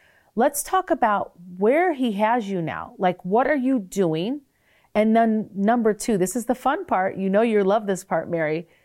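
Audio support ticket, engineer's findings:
Nothing stood out on listening to this speech recording; no issue found to report in the ticket.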